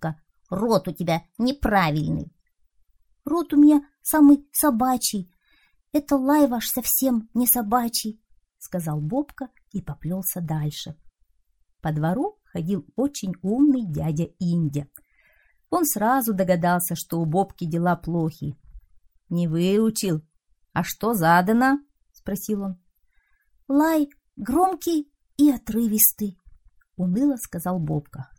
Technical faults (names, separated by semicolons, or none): dropped samples